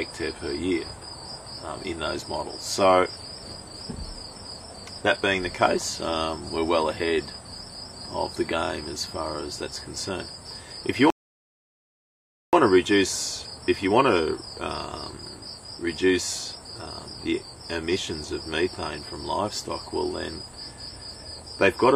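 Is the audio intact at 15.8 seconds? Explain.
Yes, at 15.8 seconds the audio is intact, with no dropout, glitch or distortion at that point.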